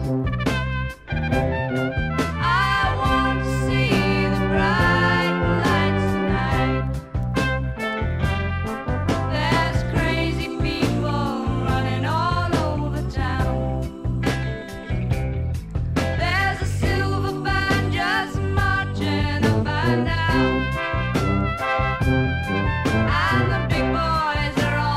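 A 50 Hz buzz runs throughout, only with signal: the 44.1 to 48 kHz resampler restarted on every 20 ms block, erring at each edge.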